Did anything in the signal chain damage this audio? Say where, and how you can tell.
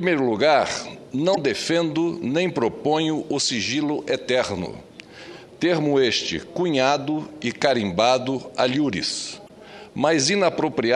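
Yes: damaged data in the compressed stream, at 1.32 to 1.38 s and again at 9.45 to 9.50 s, each a brief glitch about 56 ms long. At the codec stage, corrupted bytes make the decoder misread frames, lose sync and hunt for the next valid header.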